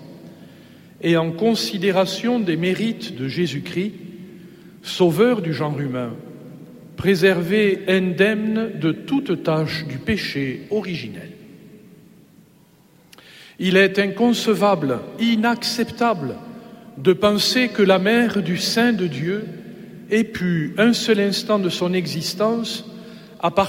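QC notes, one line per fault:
No faults to note in this clip.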